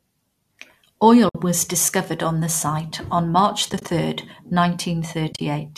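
Speech with AAC frame loss with muting: short soft-edged holes at 1.29–1.35 s, scattered dropouts between 3.70 and 3.88 s, and again between 5.33 and 5.41 s. The decoder zeroes each lost frame and the overlapping windows fade the sound out and back in. The hole sizes fit 10 ms frames, likely from a low-delay AAC stream. On a spectrogram these appear as narrow vertical blank strips with tapered edges, and in the waveform as brief dips to silence.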